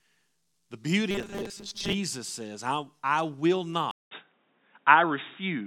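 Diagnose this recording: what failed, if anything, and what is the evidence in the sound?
Robotic sound from repeated short buffers, 1.11 to 1.94 s: the speech hardens into a rigid, metallic 200 Hz buzz, with roughly half the audio replaced by repeats. The stage is likely the driver or buffer, which starves and loops a 5 ms block.

Input switched to a poorer device at 3.91 s, continuing to the end: a 200 ms silence, then dull, boxy speech, a small level shift and a faint new noise floor. The capture stage has likely rerouted to a narrowband input, such as a headset call profile.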